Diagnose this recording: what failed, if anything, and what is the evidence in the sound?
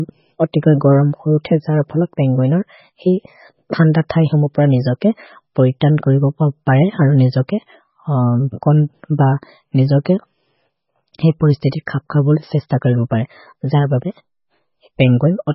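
MP3 compression throughout: nothing above 5.6 kHz, heavy watery swirl. This is likely a bit-starved codec stage, fitting about 16 kbps, that drops treble and weak frequency lines.

Pre-echo at 4.09 s: a 10 ms hiss precedes a sharp speech attack as quantisation noise, spread across the codec block, fills the quiet moment before it.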